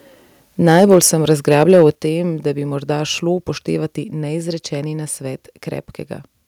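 A speech clip where the loudest syllables turn harsh and crackly from 0.66 to 0.98 s and again from 1.3 to 1.86 s, just before "o tem da bi": microphone overload, likely from input gain driving peaks about 4 dB past the converter's limit. The level then drops abruptly at 0.94 s by about 2 dB and at 1.95 s, before "tem da bi morda", by about 6 dB, likely the microphone volume being stepped down in response.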